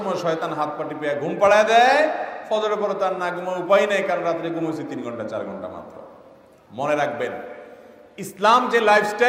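No technical faults can be heard anywhere in the clip. Nothing in the audio calls for a fault description at any point.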